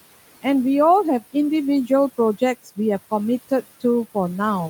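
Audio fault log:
throughout — noise suppressor artifacts: the suppressor estimates which frequency bands hold steady noise and pulls them down frame by frame, cutting the background by about 16 dB when the speech stops. Under the speech it lets more through, so the room noise, sitting about 18 dB below the speech, drops away in the gaps between words and comes back up beneath each phrase, producing a background that pumps with the talking rather than staying level.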